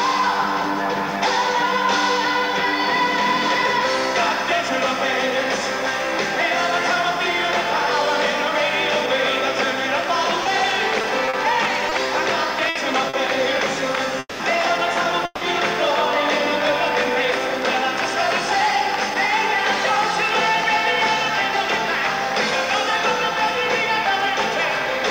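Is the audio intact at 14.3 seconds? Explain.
No. From 14.19 to 14.41 s there is a long network dropout, likely caused by audio packets that never reached the receiver. For about 200 ms the receiver stretches the last sound into a fading buzz or hiss, then about 30 ms of silence follows before playback resumes, with roughly 200 ms of material gone. On a waveform this appears as a decaying, repetitive envelope, then a flat gap. A spectrogram shows smeared, static bands fading to blank.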